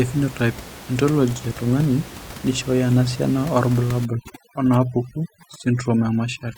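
From 4.05 s to the end, the background drops and breaks up into twinkling specks. This is overdone noise removal: an over-aggressive reducer mutes bands near its noise estimate, taking quiet speech detail along with the room noise, which sits about 17 dB below speech.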